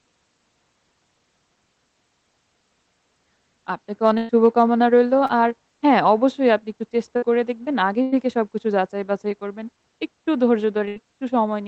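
Burst of packet loss hits this speech clip four times: at 4.17 to 4.31 s, 7.17 to 7.24 s, 8.02 to 8.14 s and 10.88 to 10.98 s. In each, a run of packets arrived too late or not at all, so the receiver extended the last sound and faded it. You hear a held buzz or thinning hiss in place of the real audio, and then the talk picks up further along. About 120, 60, 100 and 80 ms of material are simply gone. A short concealed packet loss at 5.27 to 5.31 s is smaller: roughly 20 ms never reached the decoder, and the gap was patched by continuing the preceding sound and blending back in. It comes across as a quick smear or wobble rather than a dropout. Underneath all of this the audio has passed through a WebRTC call path using Opus. That leaves codec coding noise and a top end cut off around 8 kHz, which points to a fairly low bitrate.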